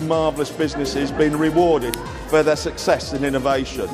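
At 1.94 s there's an uninitialised buffer: a tiny, loud burst of digital junk, about 0.73 ms long, which fits a 32-sample block played before anything was written into it.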